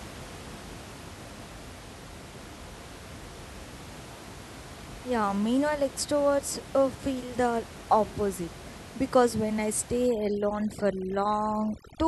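Speech, with room noise about 17 dB below the voice. From 10.07 s to the end at 12.08 s, after "because when I", overdone noise removal strikes. Bands near the noise level are cut hard. The background drops and breaks up into twinkling specks.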